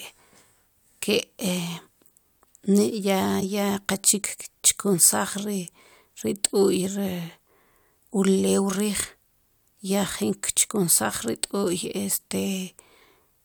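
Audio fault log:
3.40–3.43 s, corrupt frame decoded: a brief chirp-like blip cuts across the speech, peaking at roughly -15 dBFS. About one compressed frame had flipped bits, and the decoder played it anyway, so misread codes and gains put energy at the wrong frequencies for that frame's length.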